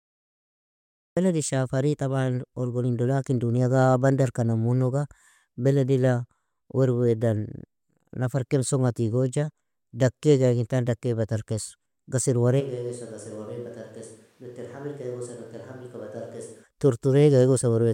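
The first 1.17 s is digital silence, then the speech comes in mid-sound with no attack, a cut-off start where the recording began late. From 12.62 to 16.62 s the sound abruptly turns roomy, hollow and thinner, roughly 10 dB quieter with room noise only about 30 dB down, then snaps back. That's likely a switch to a distant microphone.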